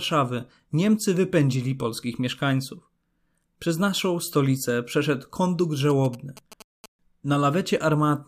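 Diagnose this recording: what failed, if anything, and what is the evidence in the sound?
GSM signalling bursts break into the speech from 5.90 to 6.86 s, at the analogue wiring stage. The interference is a galloping dit-dit-dit of short buzzes whose pulse rate sits at about 217 Hz, roughly 20 dB below the speech. A nearby 2G phone transmitting signalling bursts induces RF in the input cabling or preamp, where a junction rectifies the radio envelope and leaves the burst pattern as audible audio.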